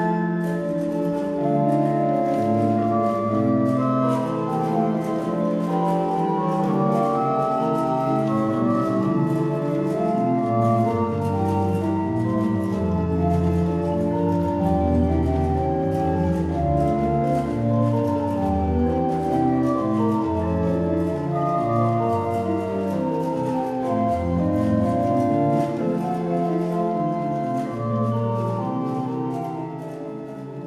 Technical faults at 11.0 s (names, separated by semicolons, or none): none